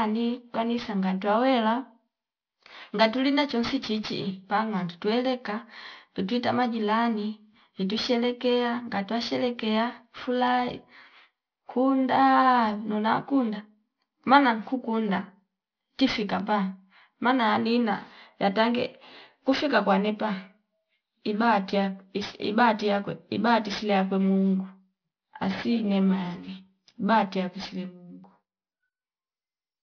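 Aliasing runs throughout: energy above 5.5 kHz folds back below it, making sibilants gritty and metallic, consistent with unfiltered resampling to about 11 kHz.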